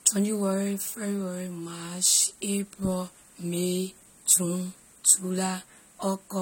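From start to finish the speech sounds dull and smeared, with a warbly, fizzy edge on sibilants and nothing above 16.5 kHz. That's likely AAC compression, AAC-LC at a low bitrate around 32 kbps, quantising the spectrum coarsely and leaving gaps.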